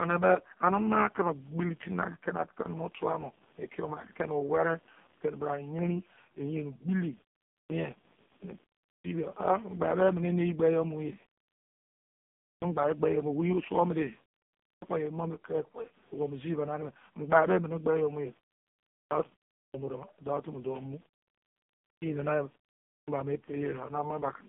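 Computer activity noise runs under the whole recording: a buzzy, chirping pulse train at around 70 Hz, far below the speech level, that wanders with the machine's load rather than with the talker. On a spectrogram it appears as faint vertical striations with harmonic combs that shift independently of the voice.

Also throughout, the AMR narrowband mobile codec squeezes everything into a line band from 150 Hz to 3.5 kHz. Nothing reaches above 3.5 kHz, which shows as a hard ceiling on the spectrogram. The heavy buzzy, synthetic roughness points to one of the lowest AMR modes, around 5 kbps.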